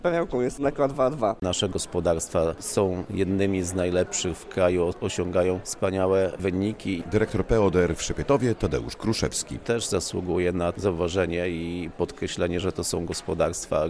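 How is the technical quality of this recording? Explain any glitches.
No glitches can be heard anywhere in the recording, and the signal stays continuous and steady throughout.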